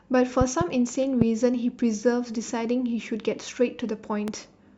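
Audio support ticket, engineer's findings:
Loud pop, three events. Likely cause: a voltage transient from a plug, switch, static discharge or driver glitch, added to the signal path and shaped by downstream circuitry. The result is sharp pops on top of the speech, which continues underneath. 0.41–0.64 s: two pops in quick succession, peaking about 15 dB above the signal. 1.21–1.24 s: single pop, about 15 dB above. 4.28–4.31 s: single pop, about 10 dB above.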